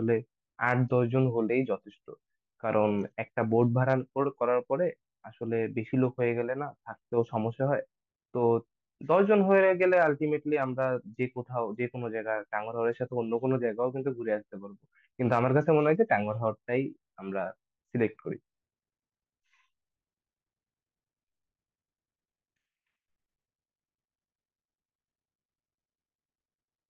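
No technical faults can be heard in the speech recording, and the signal stays continuous and stable throughout.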